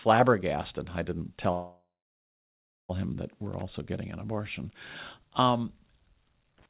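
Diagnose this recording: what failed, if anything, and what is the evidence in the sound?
After "i didn't", at 1.52 s, the speech halts and its last sound is stretched into a fading buzz that sinks to near silence for about a second. At 2.92 s it resumes with "him that", with nothing skipped. This is a call audio freeze at the network and jitter-buffer stage. Packets were likely held up, the buffer ran dry, and about 1.37 s of filler was inserted.

A short, irregular burst of scratchy crackle runs from 3.52 to 3.62 s, between "him that" and "getting an abortion", and a second one runs from 6.58 to 6.66 s. This is loose connector crackle in the analogue wiring: a worn or dirty contact makes and breaks rapidly as it shifts, chopping the signal into brief ragged fragments.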